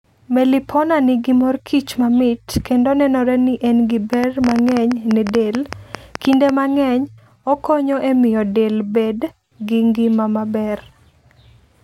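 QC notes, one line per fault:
4.13–6.50 s, train of clicks: a burst of sharp ticking and popping cuts across the speech, about twenty near-identical clicks at roughly 9.3 per second but unevenly spaced, so it sounds like a stuttering rattle rather than a steady tick. The clicks stand out sharply, peaking around 15 dB above the speech. The repeated pulse shape and short, bounded run point to a likely cause in electrical interference from nearby equipment or a faulty connection or power supply.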